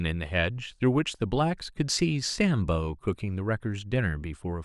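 Nothing in this recording stood out as a technical fault on listening.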